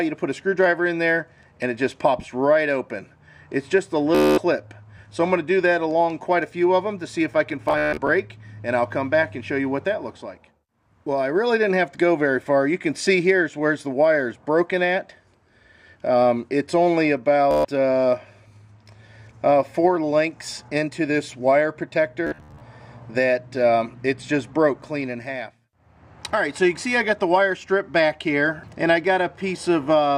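Bluetooth stutter at 4.15 to 4.38, 7.69 to 8.09, 17.51 to 17.65 and 22.27 to 22.61 s: late or lost wireless packets make the receiver loop its last short slice, producing a buzzing stutter before the sound jumps ahead.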